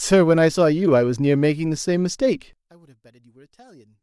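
A speech recording; from 2.53 s to the end the level collapses by about 27 dB, leaving a faint residue, likely one channel inverted cancelling centred content in mono.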